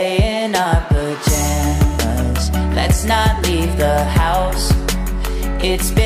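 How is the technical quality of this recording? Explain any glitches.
No glitches turn up anywhere in this recording. There is nothing to explain here, as no technical fault can be heard at any point.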